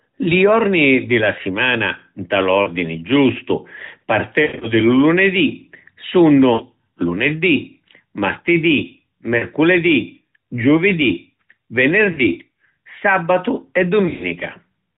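Speech carried over narrowband AMR suffers lost AMR speech frames: radio errors corrupted frames, so the decoder repeated its last good settings at falling gain, causing brief dips and warbles at 2.62 s after "di la simana nta", 6.54 s, 9.38 s and 12.12 s, and longer, drawn-out fading stretches of about 160 ms from 4.42 s before "di lu" and about 120 ms from 14.06 s.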